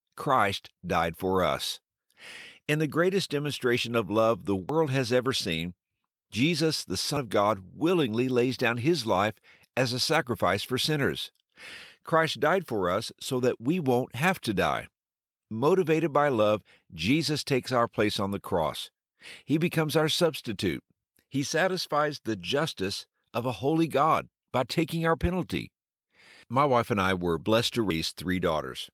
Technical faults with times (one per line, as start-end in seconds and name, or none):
4.69 dropped buffer (overrun)
27.90 dropped buffer (overrun)